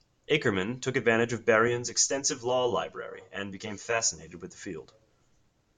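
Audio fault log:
1.68–4.27 s, channel delay (comb filtering): one channel runs roughly 10 ms behind the other, and the mono sum cancels at evenly spaced frequencies from around 50 Hz upward, giving a hollow, phasey tone. A spectrogram shows regularly spaced dark horizontal notch lines across this span.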